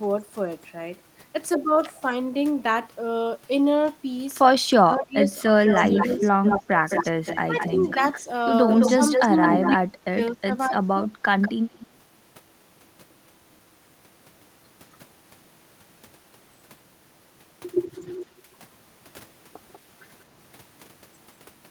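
From 4.74 to 11.11 s the voice dips and breaks up in pieces, as much as 20 dB down for around two seconds in total. This is likely speech suppressed in double talk, where the echo canceller turned this side's voice down along with the echo while both sides spoke. Between 5.66 and 9.72 s a strong delayed copy trails the voice by 213 ms. Fainter scraps follow 191 ms behind at 11.42–11.87, 17.83–18.01 and 19.73–19.79 s, and each is quieter than the last. This is likely echo leak from a loudspeaker that the canceller did not fully remove.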